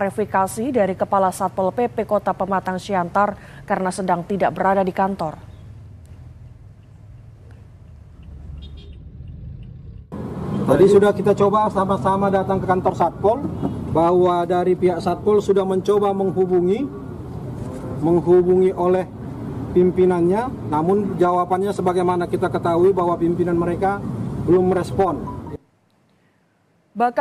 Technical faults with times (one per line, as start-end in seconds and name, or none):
none